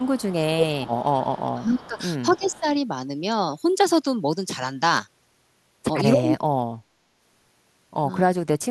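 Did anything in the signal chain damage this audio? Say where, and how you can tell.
Yes. Echo leak in call processing: a faint copy trailing 278 ms behind, about 20 to 30 dB down, at 0.00–0.36, 1.84–2.02 and 2.32–2.60 s. The fixed lag, unlike diffuse reverb, points to a likely far-end canceller passing residue.

Speech suppressed in double talk, also call processing: the voice dips by up to about 40 dB at 0.49–1.03, 1.20–2.00, 2.30–2.67, 6.13–6.97 and 8.28–8.70 s, with likely gain ducking rather than abrupt packet-loss gaps.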